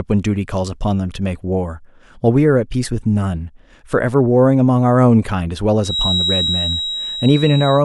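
From 5.80 s to the end at 7.85 s, a feedback whistle sits behind the speech. It is a thin, steady tone at 3.8 kHz, swelling and fading slowly in level, a little below the speech level. The likely cause is a loudspeaker-to-microphone loop hovering at the edge of feedback.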